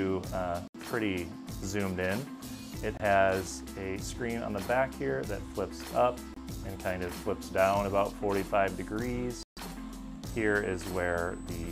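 Packets likely failed to reach the headphones in time and were discarded, leaving silent holes at 0.68–0.76, 2.97–3.01, 6.34–6.38 and 9.43–9.59 s. These are Bluetooth dropouts. The gaps run roughly 70, 23, 23 and 140 ms, and afterwards the sound resumes as if it had kept playing.

From 10.3 s to the end, the USB bus's 125-microsecond microframe activity leaks in through power or ground as USB whine. It is a fixed 8 kHz tone sitting roughly 25 dB below the program.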